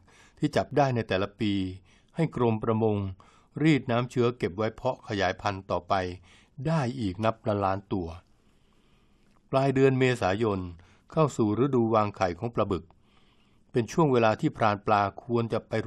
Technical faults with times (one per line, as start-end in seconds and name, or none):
0.71 overlap between stream segments
12.70 overlap between stream segments